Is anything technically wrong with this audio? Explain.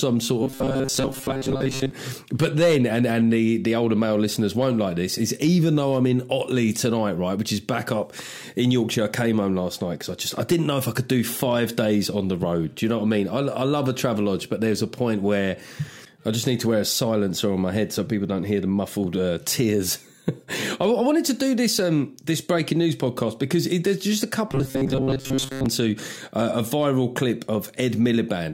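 Yes. From 0.43 to 1.91 s and again from 24.49 to 25.66 s, the sound turns into a rigid, metallic 134 Hz buzz: robotic sound from repeated short buffers, likely from a roughly 7.5 ms fragment replayed in place of most of the missing audio.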